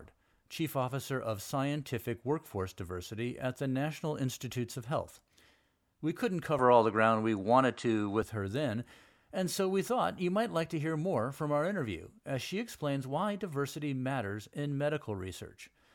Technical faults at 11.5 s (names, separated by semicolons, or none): none